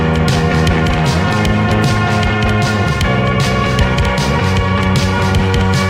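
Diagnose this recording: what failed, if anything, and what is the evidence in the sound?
Doubled audio track, throughout: every sound returns as a full-band copy about a second later, a few dB quieter, with no decay or room colour. It is likely a second, slower capture path or an edit mixing two out-of-step copies.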